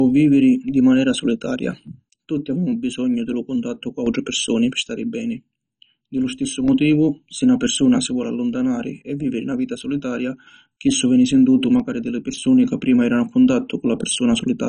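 From the start the speech sounds dull and gurgling, likely heavy MP2 compression at a rate near 32 kbps. The spectrogram is empty above 10.1 kHz, with upper bands flickering.

At 1.87–4.07 s, 4.83–6.68 s, 8.07–10.47 s and 11.80–12.44 s the level falls abruptly by about 6 dB, likely one channel dropping out. The waveform visibly shrinks in blocks.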